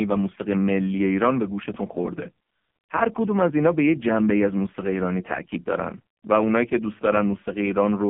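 A speech recording that sounds thin, buzzy and synthetic from start to finish, with nothing above 3.4 kHz and little below 150 Hz. The cause is the AMR narrowband mobile codec, whose 5 ms pulse-driven vocal-tract model at heavy compression fits one of its lowest modes, around 5 kbps.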